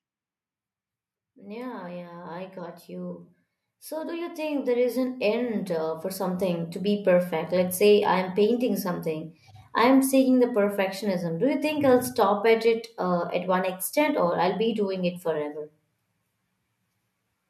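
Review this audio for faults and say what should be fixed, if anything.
Automatic gain rising runs from 1.21 to 7.59 s, ending just before "say I'm painting something". The gain control judged the speech input too quiet and climbed about 12 dB over roughly six seconds, so voice and room noise swell together. Setting a fixed input gain at the correct level, or disabling the automatic gain control, prevents this.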